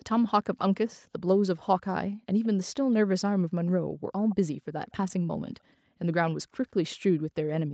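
Speech with two brief echo-leak scraps, at 2.43–2.47 s and 4.29–4.36 s: faint copies, roughly 25–30 dB down, trailing 162 ms behind the speech, likely from incomplete echo cancellation. The fixed, discrete delay sets them apart from reverberation.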